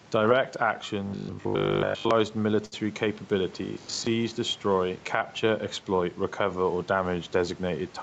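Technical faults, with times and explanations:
Throughout, gain pumping: loud and soft parts end up closer in level, with level swinging by about 5 dB and the speech sounding squashed. The likely cause is gain set too high, with a fast limiter pulling it down on every peak.
1.07–2.11 s and 3.65–4.07 s, robotic sound from repeated short buffers: the speech turns into a rigid metallic buzz pitched at 50 Hz, the second run ending just before "destroy capture exploit recover". Most of the real audio is skipped while a fragment repeats, likely from audio arriving too seldom, which fits a 20 ms buffer.
2.65–2.74 s, short stall from a late packet: a sound is held unnaturally long, for 66 ms, before the speech resumes where it left off. A packet arrived late, the jitter buffer ran dry, and the receiver stretched the last sound until it came. Nothing is lost, but everything after it is 66 ms later.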